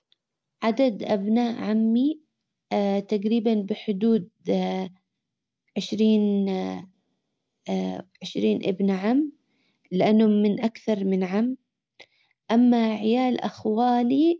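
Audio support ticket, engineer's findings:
No faults found in this speech recording. Nothing in the audio points to a failing component or path.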